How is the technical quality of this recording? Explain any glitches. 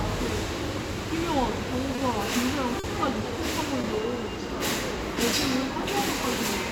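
The recording has three brief glitches, all short concealed packet loss, at 1.96 to 2.00 s, 2.80 to 2.86 s and 3.82 to 3.86 s. In each, a stretch of the stream, 20 ms at the first and third points and 40 ms at the second, arrived too late to decode. The receiver covered each gap by extending the preceding sound, either continuing its pitch or filling with shaped noise, and then faded back into the real audio. Each spot is heard as a short smear or wobble. Unlike a plain dropout, none of them leaves silence, and unlike a click, none is a sharp spike.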